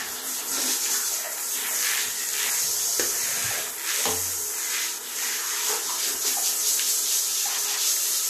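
Damaged data in a compressed stream causes brief glitches at 2.49, 4.97 and 7.57 s. Corrupted bytes make the decoder misread frames and lose sync.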